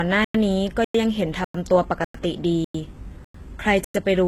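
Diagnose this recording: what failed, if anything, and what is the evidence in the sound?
The speech sounds processed throughout, with sibilants gritty and lispy and a metallic sheen in the treble. Nothing is present above about 12.3 kHz. This is codec-stage damage, likely HE-AAC compression with heavy artefacts, fitting a very low bitrate around 16 kbps. The coder keeps only the lower spectrum and synthesises the top by copying lower bands upward under a coarse envelope, so the rebuilt harmonics fail to line up with the real ones.

The sound is also cut by silent holes, each 100 ms long, at 0.24–0.34, 0.84–0.94, 1.44–1.54, 2.04–2.14, 2.64–2.74, 3.24–3.34 and 3.84–3.94 s. They recur every 0.6 s, so each 0.5 s stretch of audio is followed by a hole. These are gaps between chunks, arising at the transport or playback stage. The material arrives in 0.5 s blocks, and silence is left at each join, without losing any audio.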